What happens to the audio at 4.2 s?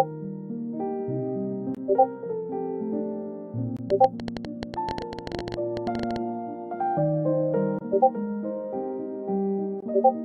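A rapid, uneven ticking and popping sits over the sound, a train of clicks running from 3.90 to 6.17 s at about 12.4 per second, around thirty similar pulses peaking well above the audio. The likely cause is interference or a faulty connection injecting repeated impulses.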